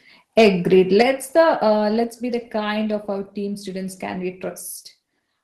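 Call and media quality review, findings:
Harsh, crackly flattening on the loudest peaks, 0.38 to 0.48 s, peaks pushing about 4 dB past full scale with a few percent of samples squared off. Likely microphone overload: input gain set too hot, converter cutting the tops off.

Same crunchy edge again, shorter, 1.00 to 1.02 s, right before "the uh", about 3 dB over, around 3% of samples clipped. Same story, likely mic preamp driving the converter into its ceiling.

Sudden level drop at 1.02 s, right before "the uh", voice and background both down about 5 dB in one step, straight after that clipped peak. Likely microphone volume stepped down by the call app's gain control reacting to the overload.

Second step down at 2.04 s, between "the uh" and "be the kind of", another drop of about 3 dB, everything quieter at once. Same mechanism, likely the app trimming input volume again.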